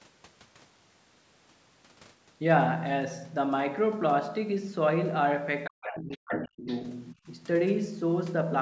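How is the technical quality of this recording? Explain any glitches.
The recording has two glitches in the second half, both in the same stretch. From 5.64 to 5.87 s, 6.15 to 6.47 s and 6.67 to 6.83 s, a second, quieter voice intrudes, at about 10 to 20 dB below the talker. This is the other side's voice leaking through, likely because the echo canceller left some loudspeaker playback in the microphone. From 5.69 to 6.67 s, and briefly from 7.13 to 7.27 s, the talker's speech sinks and breaks up, dropping by roughly 40 dB at its deepest. This is speech suppressed in double talk: with both sides talking at once, the canceller likely turned everything down. The call microphone processing is also audible in that nothing reaches above 8 kHz.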